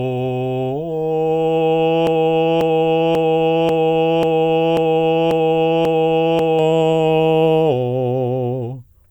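At 2.07 s the music gets stuck in a broken-record loop. A fragment about 0.54 s long plays over and over, back to back and identical each time, eight repeats in all, until the music picks up again at 6.59 s. Whatever should have played in those four and a half seconds is simply gone. The likely culprit is a player, encoder or stream that stalled and kept pushing out the last chunk it had buffered.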